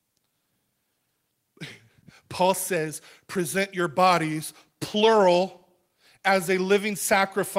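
Small hiccups run through the whole recording of speech, irregularly spaced, giving the delivery a faintly unsteady pace. That is clock drift between sender and receiver. The sending device's audio clock runs faster than the receiver's, by roughly 4 percent, so samples arrive a little quicker than they are played out. The receiver's jitter buffer keeps filling up, and something has to give repeatedly across the clip.

From 0.19 s to 7.58 s the audio is pushed along, with tiny skips where short slivers seem to vanish, all tending the same way and never at a regular rhythm. These are repeated timing corrections. To stop its buffer overflowing, the receiver keeps discarding short pieces of the incoming stream, which nets out to playback at about 103 percent speed. Each cut is small, so it registers mainly as slight stumbles and an unsteady tempo.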